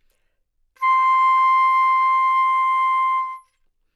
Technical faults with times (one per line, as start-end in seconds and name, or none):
none